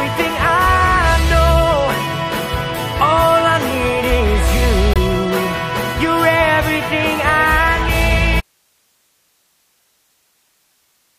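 A corrupt frame muted at 4.94 to 4.97 s leaves an abrupt 36 ms hole of silence, a length that fits a single compressed frame. Bits in the frame were flipped, the decoder rejected it, and the player filled its slot with silence without shifting the timing.

An audio dropout to a faint residue begins at 8.41 s and runs to the end. The signal cuts out mid-flow and only hiss remains, roughly 45 dB below the signal. The likely cause is a break upstream while the path after it stayed live.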